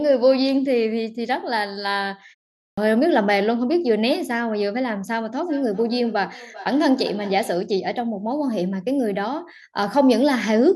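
A clipped start after a pause comes at 2.67 s. After a 0.41 s gap the output device has dropped into a low-power state, and waking or relocking costs about 105 ms, so the speech returns abruptly with its opening sounds missing.

Feedback echo between two devices runs from 5.39 to 7.68 s. A second device in the room plays the call back into the first microphone, beyond that device's echo canceller. Each word recurs roughly every 0.4 s, thinner and ringing, peaking at about 19 dB below the speech.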